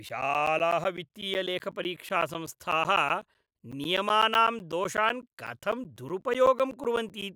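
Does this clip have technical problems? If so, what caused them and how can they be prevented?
Yes. Periodic USB or driver dropouts occur from 0.09 s to 7.22 s. Every 0.125 s, about 10 ms of speech drops to silence, giving around fifty regular ticks. A background task stalls the USB bus or audio driver. Disabling USB power saving prevents it.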